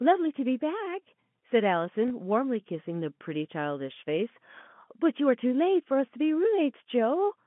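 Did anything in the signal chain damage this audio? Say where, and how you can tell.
Yes, there's one network-stage problem: packet loss with the last packet repeated, at 2.08 to 2.10 s. About 20 ms of speech went missing, which fits a single lost packet, and the receiver replayed the previous packet to fill the hole. That repeated chunk probably doesn't line up with the pitch cycle, and it comes through as a small blip. The band-limited G.711 telephone sound is just the line working as normal.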